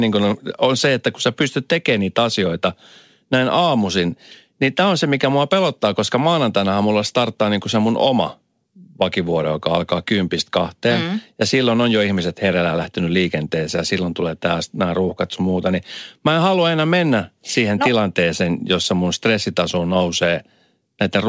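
Nothing stood out on listening to this speech, which comes through a call path whose content stops at about 8 kHz, consistent with a wideband codec such as G.722.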